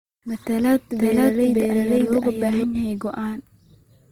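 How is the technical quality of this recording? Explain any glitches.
The recording has two clear problems: codec grit across the whole clip, and a stretch in the middle where the speech is doubled.

From start to finish there's a grainy, rough texture on the speech that sounds like Opus compression, likely in its CELT music mode at a low rate, something around 24 kbps. Bandwidth stays full, reaching about 20.2 kHz, but when the encoder runs short of bits it fills bands with folded or noisy content, so tones go coarse instead of swirly.

From 1.00 s to 2.64 s there's a doubled audio track. A second copy of the speech runs about half a second behind and at roughly the same level, with no reverb tail. It cuts in and out abruptly, so there's likely a second capture path or a misaligned edit layering two copies.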